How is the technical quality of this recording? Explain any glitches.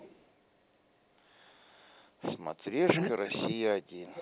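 The recording has two call-related glitches: a faint echo at the very start and the talker being pushed down twice later on. The audio is also band-limited to 4 kHz, which fits a narrowband telephone codec such as G.711.

Echo leak, 0.00 to 0.32 s: A delayed copy of speech, lagging by about 0.96 s and sitting roughly 25 dB under the main talker, is heard as a faint ghostly trace. It was likely left behind when an echo canceller failed to remove a far-end loudspeaker signal from the microphone.

Speech suppressed in double talk, 2.42 to 2.49 s and 2.94 s to the end: The talker's level drops sharply, by roughly 25 dB in a brief 70 ms dip, then by around 40 dB for the rest of the clip, so the voice nearly disappears. This is likely an echo canceller mistaking overlapping speech for echo and turning everything down.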